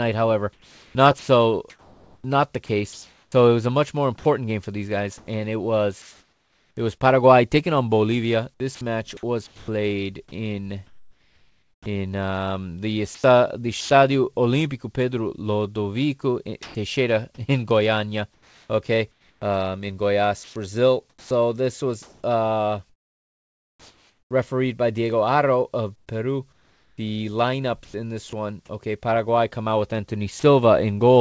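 Speech, carried over a call path whose spectrogram stops at 8 kHz, consistent with G.722 at 64 kbps. Sound chopped by the voice detector, likely from its repeated gating, leaves spans of flat comfort noise showing as smooth, featureless bands between speech bursts: 0.53–6.77 s (2.37 s replaced, ending before "it was"), 8.54–13.90 s (1.59 s), 18.34–24.31 s (2.61 s), and 25.96–28.33 s (0.69 s, before "one okay"). Sound dropped by the voice detector briefly swaps speech for noise, with the waveform dipping to a level hiss at 16.63–16.75 s and at 30.40–30.43 s after "come out with".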